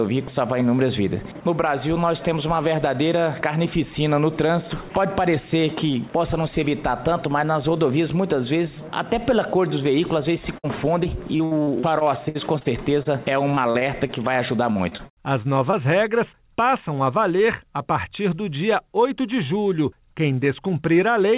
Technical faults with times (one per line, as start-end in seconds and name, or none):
10.58-10.65 burst of packet loss
11.03-12.67 repeated packet loss (robotic sound)
13.03-13.07 short concealed packet loss
13.51-14.11 repeated packet loss (robotic sound)
14.73-15.11 repeated packet loss (robotic sound)
15.71-15.75 short concealed packet loss